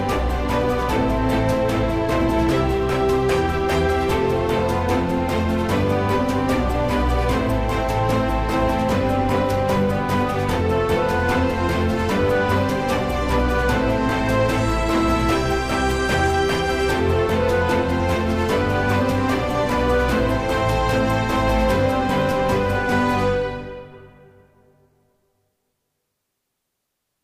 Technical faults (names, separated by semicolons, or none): loose connector crackle